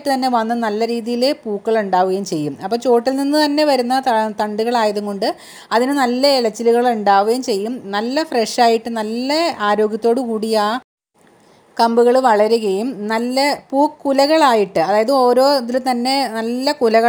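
Right through the clip there's imaging from linear upsampling: the top end sounds dulled, and a faint mirror copy of the spectrum sits from 12 kHz up to 24 kHz, roughly 35 dB below the signal. That fits audio that started at 24 kHz and was raised to 44.1 kHz by just joining the samples with straight lines, which filters too weakly to remove those images. You hear it as a light metallic shimmer on sibilant and bright, high material.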